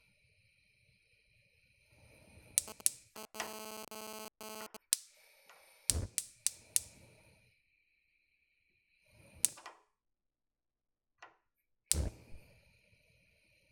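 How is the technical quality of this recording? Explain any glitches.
The recording has one clear glitch, a burst of radio interference.

GSM phone buzz, from 2.68 s to 4.77 s. A 2G handset close to the recording chain was transmitting in pulses repeating at 216.7 Hz, and some audio stage rectified those radio bursts into the signal. The result is a harsh, raspy buzz with a dense stack of harmonics, sitting only about 5 dB below the wanted sound and unrelated to it. Because the phone was transferring data rather than holding a call, the buzz is intermittent, stuttering in and out instead of holding steady.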